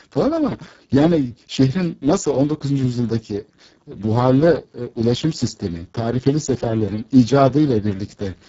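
From start to finish the speech carries heavy Speex codec damage. It sounds hoarse and grainy, which fits Speex run at a very low setting, around 6 kbps. At that rate the CELP coder has too few bits for the excitation, so the fine texture turns into noise. Nothing gets through above 7.7 kHz, and the band between 4 kHz and that ceiling is only a shaped, hissy fill.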